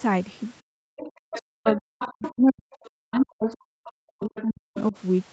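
From 0.61 to 0.92 s the room sound drops away by about 40 dB, then returns. This is background gated by the echo canceller. With the loudspeaker playing, the canceller pulled the microphone down hard for roughly a third of a second.

From 0.97 to 2.31 s a second voice sits under the speech, around 15 dB below it. This is the other side's voice leaking through. The echo canceller likely left part of the loudspeaker signal in the microphone. It returns at 2.88 to 3.52 s, about 25 dB down, then at 4.21 to 4.43 s and 4.75 to 4.92 s, both about 20 dB down.

From 1.2 to 4.95 s the speech keeps dipping and breaking up, for roughly three seconds in total. At its worst it falls about 40 dB. This is speech suppressed in double talk. Both sides likely spoke at once, and the canceller turned down the wanted talker along with the echo.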